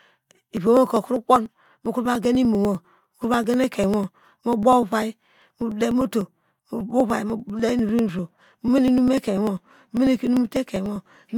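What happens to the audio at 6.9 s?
At 6.9 s the speech is inside a run of periodic USB or driver dropouts lasting from 0.07 s to 11.26 s. Every 0.099 s, about ten times a second, something stalls the USB bus or audio driver and around a millisecond of audio is skipped outright, so the waveform jumps and ticks. The ticks are evenly spaced and heard only under speech, unlike random clicks or irregular buffer underruns, whose timing wanders.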